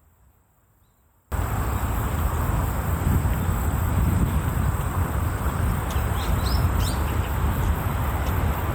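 From the start to about 1.32 s, the sound is almost gone, sitting about 35 dB below where it returns, with only a faint residue left and no solid centre. This is most likely one channel inverted: with one side of the stereo pair in reversed polarity, everything shared by both channels cancels when they are combined to mono, leaving just the small difference between them.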